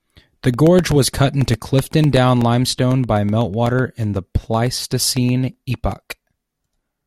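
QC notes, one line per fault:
0.16 to 6.92 s, periodic USB or driver dropouts: a steady train of small ticks runs under the speech, about eight per second, audible only while there is signal. Every 0.125 s something blocks the USB bus or audio driver and roughly a millisecond of audio is lost and filled with silence. Each tiny gap breaks the waveform abruptly, producing a click. About fifty occur, evenly spaced.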